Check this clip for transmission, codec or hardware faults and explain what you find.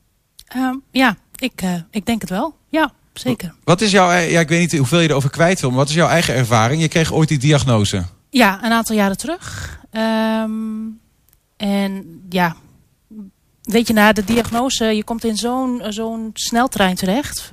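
Loose connector crackle from 14.22 to 14.59 s. For a little over a third of a second, the speech breaks into an irregular burst of scratchy crackle. A worn or dirty contact in the signal path is shifting, so the connection opens and closes many times in quick succession. Each break chops the waveform, and any DC on the line snaps in and out as pops, giving a rough, uneven texture.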